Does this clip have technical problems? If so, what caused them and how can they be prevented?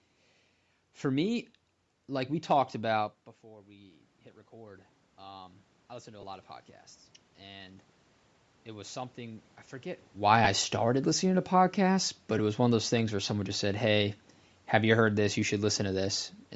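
Yes. Three kinds of fault can be heard.

Bluetooth LC3 compression runs through the whole clip and is plainly audible. Speech has a breathy, grainy edge, because at this bitrate the codec discards much of the upper spectrum and fills those bands with shaped noise instead of real detail. The texture points to a fairly low bitrate, around 48 kbps, with short 7.5 ms frames. The top of the band stops at 8 kHz, which is the call microphone processing and not the codec. This is likely LE Audio transmission at a constrained setting. Prevention: use a higher LC3 bitrate or a less congested link so the codec can keep more real spectral content.

Automatic gain rising runs from 2.12 to 9.52 s. The input level drops by about 18 dB, and the gain control responds by slowly raising its gain by about 12 dB. Speech and room noise swell together over several seconds. A change in the talker's distance around 3 s overlaps this stretch, but the slow, joint rise of voice and noise comes from the gain stage. 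Prevention: fix the input gain or slow and limit the AGC so that short level drops do not pull the noise floor up.

Lost LE Audio frames occur at 6.21–6.23 s, 10.45–10.47 s and 12.38 s. The first two gaps last about 15 ms each, which fits two missing 7.5 ms frames. The last is a single 7.5 ms frame. Each time, the decoder repeats the previous spectrum with randomised phase signs, so the speech briefly turns into a short noisy smear rather than a clean dropout. The gaps are short enough that no fade to silence is heard. Prevention: improve radio conditions and reduce interference or range so that frames arrive intact.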